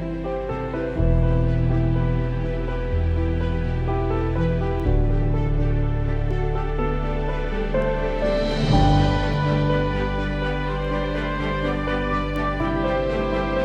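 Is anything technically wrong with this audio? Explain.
Yes, there are word clock ticks from 0.26 s to 12.36 s: around ten ticks at a steady rate of roughly one every one and a half seconds. That pattern suggests the receiving device runs on its own clock, about 15 ppm off the sender's, so each time the clocks slip, one sample gets dropped or repeated.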